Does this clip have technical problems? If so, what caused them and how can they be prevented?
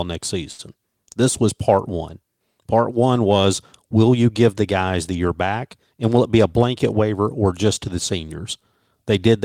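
Yes. There's a short stall from a late packet at 0.51 to 0.61 s, right before "this was part one". A packet showed up late, the jitter buffer ran dry, and the receiver stretched the last sound for about 74 ms, so nothing's lost, just held. A slightly deeper jitter buffer or a steadier network path would stop this.

Then there's a jitter buffer speed-up from 5.92 to 6.59 s, between "guys the year back" and "waiver or just to". The buffer had piled up extra audio, so the receiver trimmed out tiny pitch-period chunks, about 70 ms in total, and the speech runs roughly 10% faster at the same pitch. Smoother packet delivery prevents that backlog.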